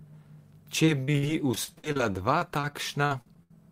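From 0.85 to 3.55 s the speech turns choppy and robotic: repeated packet loss, with frequent holes up to 70 ms each patched by stretching the preceding sound.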